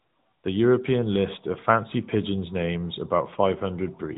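Throughout, the speech runs through AMR narrowband mobile codec coding. Each 20 ms frame is rebuilt from a vocal-tract model and a few pulses, giving a plainly buzzy, synthetic edge consistent with a mid-rate mode near 10.2 kbps. A spectrogram shows nothing above 3.8 kHz.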